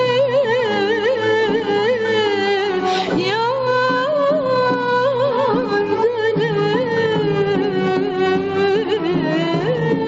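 Throughout, there is a level swing of around 5 dB that leaves the audio squashed and flat in dynamics. This gain pumping is likely caused by input gain set far too high, with a fast limiter pulling it down on every peak. Nothing is heard above 8 kHz.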